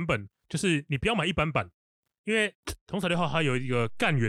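At 3.14 s a DC step occurs: the waveform's zero line jumps to a new resting level, offset by about -37 dBFS, as if an input stage carrying its own bias had been switched in or the converter had recalibrated. The jump is heard as a single low thump at that instant, while the speech carries on unaffected. The shifted baseline then holds until the end of the clip, with no step back.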